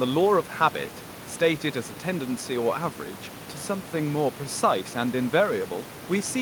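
No technical faults are present.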